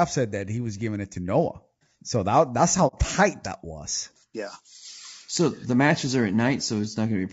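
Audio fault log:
Throughout: low-delay AAC compression. The speech sounds rough and grainy for the whole clip. Noise fills the gaps between the pitch harmonics, and the top band sounds dull and synthetic. This damage is plainly audible. It likely comes from AAC-ELD, the low-delay codec used for video calls. Its short frames cannot separate closely spaced harmonics well, and they cost extra bits. The texture fits a bitrate around 32 kbps, where there are too few bits to code the harmonics cleanly.
2.87 to 2.95 s: AAC frame loss with muting. The sound fades away, leaves a gap of about 60 ms, and then fades back in. The hole has soft edges. This is what happens when the decoder zeroes the spectrum of missing frames. The overlapping windows then taper the sound down and back up instead of cutting it abruptly. The length of the gap fits two lost frames at this codec's short frame size.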